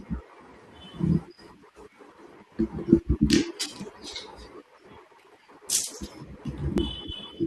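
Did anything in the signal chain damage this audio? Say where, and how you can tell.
Yes, periodic USB or driver dropouts: from 3.81 to 6.78 s the speech ticks every 0.99 s, with about four skips of roughly 10 ms each.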